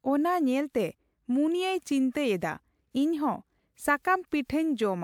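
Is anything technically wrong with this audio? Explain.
No, there is nothing technically wrong with this speech.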